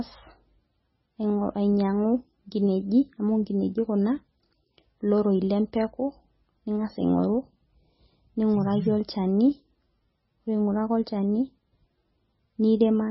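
Throughout, the speech sounds watery and swirly, with nothing above 5.6 kHz, pointing to a bitrate near 17 kbps, likely from heavy MP3 compression.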